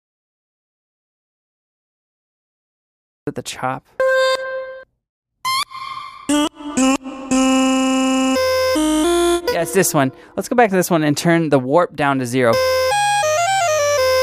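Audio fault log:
0.00 to 3.27 s, audio dropout to silence: the clip opens in dead digital silence, not even room tone, so the input was already gone when recording began. Sound then cuts in abruptly at about 3.27 s, mid-flow rather than from a clean start. Whatever happened during those first three-odd seconds is simply lost. Most likely the input device or link wasn't delivering signal, or a mute was on, while the recorder kept writing silence.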